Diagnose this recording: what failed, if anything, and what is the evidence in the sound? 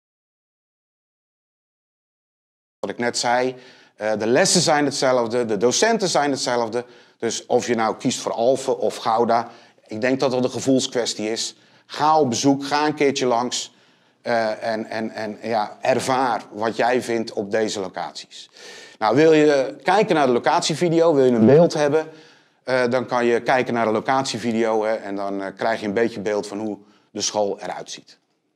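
The recording opens in an audio dropout to silence: from the first sample until 2.83 s there is nothing at all, then sound enters abruptly, already in mid-flow. The gap holds silence with no room tone or noise floor, so on a waveform it is a dead-flat line and on a spectrogram a fully black band before content starts. The likely cause is an input lost upstream, such as a disconnected device, failed link or mute, while the recorder kept writing samples.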